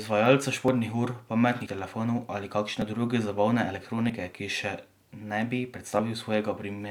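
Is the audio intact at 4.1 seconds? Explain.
No. At 4.10 s the speech jumps ahead with no gap. About 20 ms of sound is missing. This is likely a dropped buffer (overrun): the hardware overwrote samples before they were read, so the two sides were joined directly.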